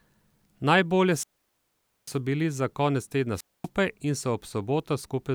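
Speech with two wireless microphone squelch dropouts, at 1.09–2.18 s and 3.34–3.68 s: the FM radio signal fades, hiss rises briefly, then the receiver's squelch mutes the output for about 0.84 s and 0.24 s respectively before the audio returns.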